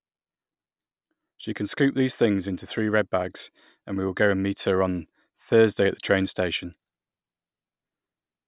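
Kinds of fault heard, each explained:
No technical faults can be heard in the speech. There is nothing here that needs explaining as a fault.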